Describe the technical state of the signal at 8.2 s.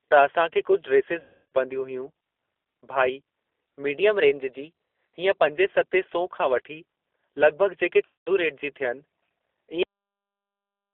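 At 8.2 s the stream has dropped packets: from 8.05 to 8.29 s about 200 ms of audio never arrived, which fits roughly ten 20 ms packets. This is VoIP packet loss concealed by the speech codec. The decoder keeps extending its last pitch and filter at falling gain, so the speech smears into a fading buzzy tone or coloured noise and stays weak for a moment after audio resumes. Underneath, the G.729 codec at 8 kbit/s confines everything to roughly 300 Hz to 3.6 kHz and rebuilds the speech from a few pulses per frame, giving the whole passage a plainly rough, synthetic edge.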